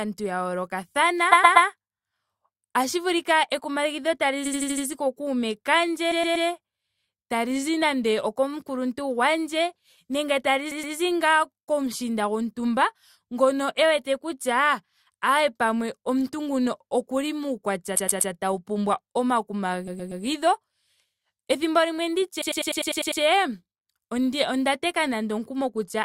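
The speech stutters with repeated frames at 1.31–1.67, 4.45–4.86 (between "otashi vulika ekumagidho" and "ku kuume"), 6.11–6.47 (right after "ku kuume"), 10.71–10.95, 17.95–18.31 (between "nguno okuli muukwatya" and "tau pumbwa"), 19.87–20.23 and 22.41–23.21 s. Each time, a short chunk of compressed audio got written more than once, so the same slice plays again several times in a row. It's usually a 120 ms slice, but 80 ms at 4.45 and 100 ms at 22.41, which loops eight extra times for the longest stretch. You hear a jerky loop, and every spot pads the clip out by the repeated time.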